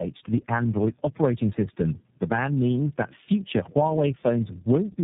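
Tandem speech coding runs through the whole speech clip: three low-rate codecs in a row, ending on iLBC, so it's rough, warbly, muffled, with nothing above 3.7 kHz.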